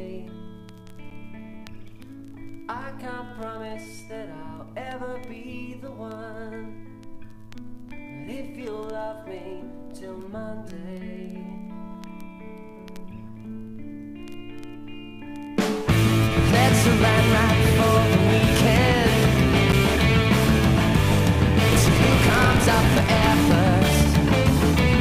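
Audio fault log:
1.10 s and 19.72 s, block of digital silence: each time a sharp tick sounds as the audio drops out for about 10 ms and returns. A short block of samples went to zero with no fade, so the abrupt edges click. The likely cause is an output buffer not filled in time.
21.66–23.55 s, block size mismatch (truncated): a steady 50 Hz buzz sits under the sound, which hurries along about 1.16 times faster while keeping its timbre. The writing stage produces longer blocks, which fits 1024 samples, than the next stage reads, so each block's tail is discarded.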